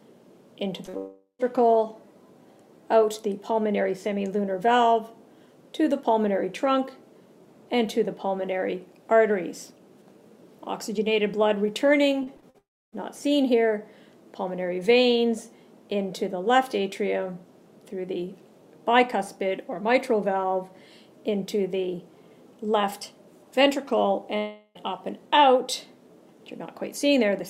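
At 0.85 and 0.89 s, short concealed packet loss causes two brief smears. Holes of 20 and 40 ms were filled by stretching the preceding sound.

From 0.97 to 1.41 s, the sound turns into a fading buzz, then silence. This is likely a long network dropout, and about 0.4 s never plays.

From 12.23 to 12.56 s, repeated packet loss makes the sound choppy and robotic. Four gaps, the longest 42 ms, are patched one after another.

From 12.58 to 12.94 s, a short buzz gives way to near silence, likely another long network dropout.

From 24.38 to 24.79 s, a fading buzz replaces the audio, likely a third dropout. The sound then returns with that stretch missing.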